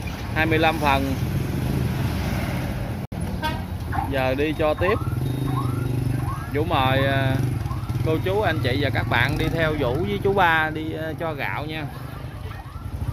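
At 3.05 s the audio cuts out abruptly, with a fade of only about 3 ms, and returns near 3.12 s. This is a digital broadcast dropout. The receiver muted on bad or missing data. The roughly 64 ms hole fits two lost frames. That material is gone.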